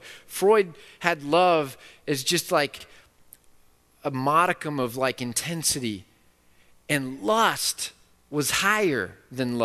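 At 2.80 s the speech stutters briefly: a stretch of about 52 ms, from 2.80 to 2.85 s, plays once and then plays again straight away. This is a case of repeated frames. A short run of compressed frames was duplicated in the stream, and the decoder rendered the same material twice. The clip runs about 52 ms longer as a result. A 52 ms block fits two frames of a typical codec.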